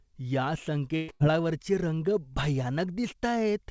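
Two bursts of packet loss hit back to back, at 0.96 to 1.11 s and 1.12 to 1.23 s. Each time the receiver stretched the last bit of speech to cover the hole, about 120 ms and then 80 ms, so you hear a fading buzz or hiss before the sound jumps ahead. Everything sits below 8 kHz, which fits a G.722 call codec.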